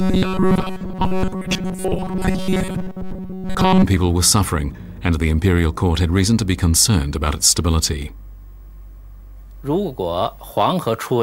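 From 0.005 to 3.84 s the audio has a robotic sound from repeated short buffers. A rigid, metallic buzz sits at about 188 Hz. It still loosely tracks the changing sound underneath. Most of this stretch appears to be repeated material rather than new audio. The likely cause is audio arriving too slowly. The software fills each gap by looping the last short slice, which fits a buffer near 5.3 ms. That loop imposes the fixed 188 Hz pitch.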